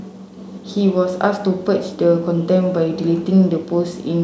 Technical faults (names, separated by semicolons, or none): none